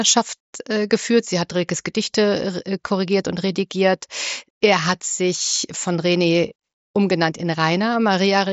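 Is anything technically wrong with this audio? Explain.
No, nothing is technically wrong with this speech clip. It has the sound of a Bluetooth mSBC headset link, with nothing above about 7.7 kHz and a light grain from the codec.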